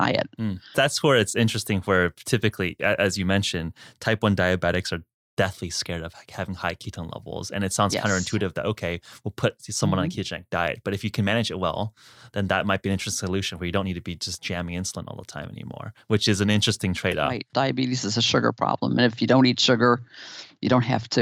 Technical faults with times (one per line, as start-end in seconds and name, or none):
2.81 corrupt frame decoded
6.94 corrupt frame decoded
17.11-17.14 corrupt frame decoded
18.27 corrupt frame decoded